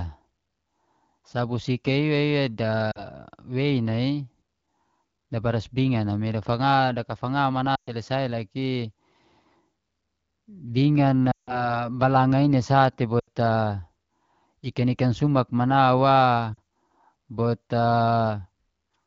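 Lost AMR speech frames at 2.91–3.04, 7.75–7.94, 11.32–11.77, 13.19–13.28 and 16.54–16.58 s: the decoder stretches the last sound and fades it, unlike a hard dropout's abrupt silence.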